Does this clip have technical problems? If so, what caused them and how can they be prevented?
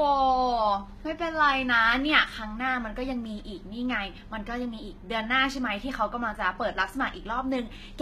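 Yes, HE-AAC compression runs through the whole speech clip: the s sounds come out gritty and metallic, and nothing reaches above 14.9 kHz. That's likely the codec faking the treble by copying lower bands upward, which fits a rate around 20 kbps. Encoding at a higher bitrate, or with plain AAC, would prevent it.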